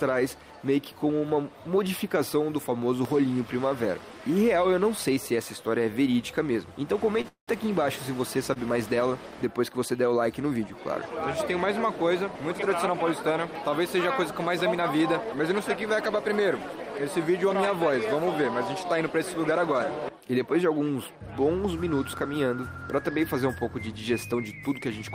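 A short stall from a late packet occurs at 7.21 to 7.26 s and again at 8.54 to 8.58 s. Each time a packet missed its slot, the jitter buffer emptied, and the receiver stretched the last sound by about 25 ms and then 22 ms before carrying on from the same point. Nothing is lost; the sound just hangs briefly with a faint buzz or dip. On a spectrogram this shows as a thin band of frozen, repeated harmonics; the waveform shows a short run of near-identical cycles. Between 7.28 and 7.50 s there is a call audio freeze. The sound turns into a fading buzz or hiss and then about 120 ms of silence, about 196 ms in total, before resuming where it left off. The likely cause is packets held up in transit draining the buffer. A spectrogram shows smeared, decaying energy followed by a blank vertical gap, and the waveform shows a tapering envelope into a flat line. These pauses add up, so the audio ends up running about 243 ms behind.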